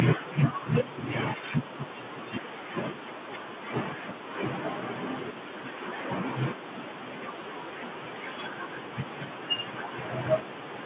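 The speech shows no technical fault: it has the narrow band of mu-law telephone coding at an 8 kHz sampling rate, with no content above 4 kHz and a faint noise floor that follows the level, as that format should sound.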